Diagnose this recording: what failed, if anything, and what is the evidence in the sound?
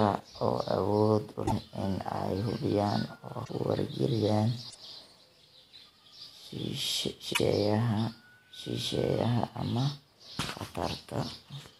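Broken MP3 bit reservoir at 1.45–1.52, 3.44–3.50, 4.69–4.76 and 7.33–7.40 s: the speech jumps ahead with a brief chirp, noise burst or short hole each time, spanning two to three 26.1 ms frames. Likely a codec-stage fault: after frames were lost, the next frames reached back for reservoir data and decoded another frame's bytes.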